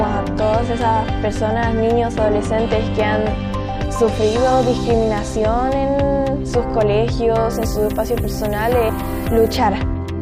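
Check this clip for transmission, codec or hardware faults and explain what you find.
One fault is present. From 7.53 to 9.57 s the audio shows low bit depth with noise shaping. The signal is reduced to about 7 bits and the rounding error is pushed upward in frequency, giving a thin, steady hiss roughly 15 dB below the signal that grows toward the treble. On a spectrogram this appears as a broadband noise floor brightening sharply toward the top of the band. The waveform shows a fuzzy, grainy layer across those seconds.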